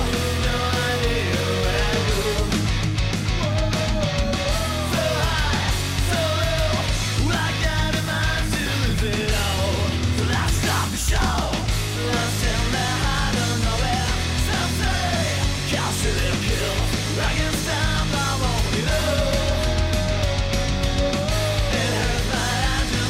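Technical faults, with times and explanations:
No technical faults are audible anywhere in the clip.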